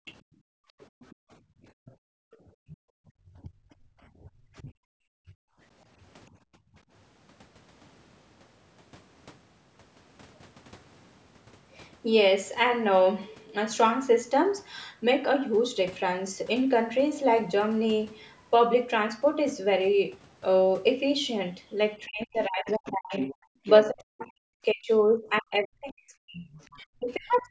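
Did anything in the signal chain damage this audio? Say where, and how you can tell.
Yes. The damage comes from the call's echo canceller, at the call-processing stage.

Background gated by the echo canceller: the room sound collapses from the start to 2.99 s, dropping by as much as about 40 dB for roughly two seconds in total. Shorter dips follow at 3.99 to 4.22 s (about 16 dB) and 6.4 to 6.77 s (about 29 dB). Each time, the canceller decided loudspeaker playback was present and clamped the microphone gain. The ambience comes back when it releases.

Other side's voice leaking through: a second, fainter voice sits under the audio from 0.06 to 2.77 s, about 25 dB below the main speech. It returns at 22.86 to 23.89 s, much stronger at about 10 dB down, and again at 26.53 to 27.42 s at about 25 dB down. The far end is likely being played on the talker's loudspeaker and re-captured by the microphone, and the echo canceller's residual suppression failed to remove all of it.

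Speech suppressed in double talk: the main voice dips in pieces between 3.27 and 5.35 s, by up to about 25 dB for around half a second in total. From 22.05 s to the end it is cut much harder, up to about 40 dB for around four seconds in all, while the leaked voice is present. The likely cause is both sides talking at once, so the canceller could not separate near speech from echo and attenuated both.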